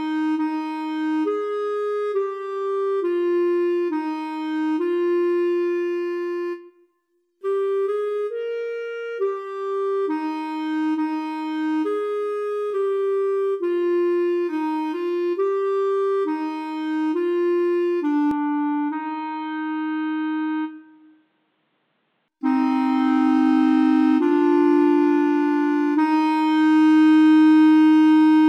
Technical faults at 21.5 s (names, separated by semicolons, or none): input switched to a poorer device